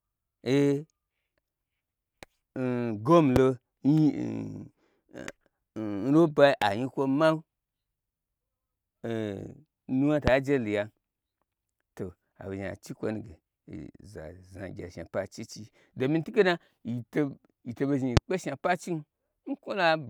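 Speech with three loud pops at 3.36–3.39 s, 10.28–10.30 s and 18.17–18.19 s, each a single sharp thump roughly 20 to 25 dB above the voice, likely from an electrical transient such as a switch or static discharge. Each shows as a tall, narrow waveform spike and a thin broadband vertical stripe on a spectrogram.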